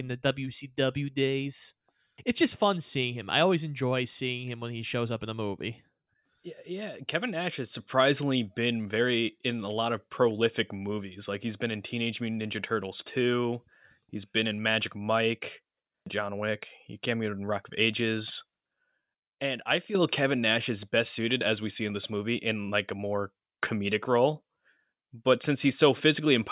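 Speech, with no audible faults.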